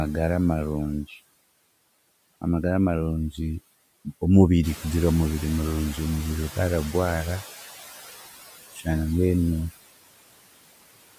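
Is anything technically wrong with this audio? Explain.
Yes, there are three noise suppressor faults in this speech.

Noise suppressor artifacts, throughout: the suppressor lowers the background by about 19 dB, frame by frame, so the leftover noise pumps between words.

Noise suppressor catching up, 4.63 to 7.5 s: when the room noise jumps about 11 dB around 4.5 s, the suppressor's estimate lags. The noise comes through louder, then sinks over 2.87 s.

Speech cut by the noise suppressor, 8.73 to 8.87 s: the suppressor mistakes part of the speech for noise and lowers it by up to about 13 dB, briefly swallowing roughly a tenth of a second.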